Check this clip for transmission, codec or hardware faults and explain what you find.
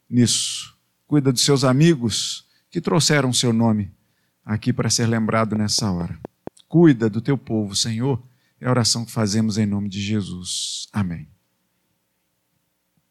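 One fault turns up: a train of clicks in the speech. From 5.56 to 6.48 s, likely interference or a faulty connection or power supply injects a pulse about 4.4 times a second at a steady rate. The result is roughly five similar pops, ticking regularly and standing out a few dB above the speech.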